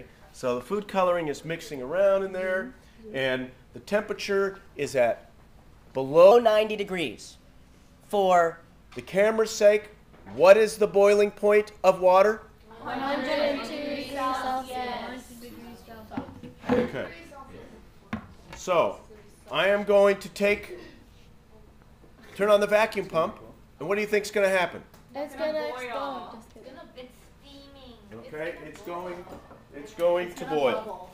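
Between 6.31 and 8.81 s the audio jumps into a section at the wrong speed: it runs about 1.17 times too fast, so everything sounds hurried and sits roughly three semitones sharp, then snaps back to normal. Because pitch and tempo move together and the change is abrupt at both ends, it's most likely that stretch being played or rendered against the wrong clock rather than anything in the source itself.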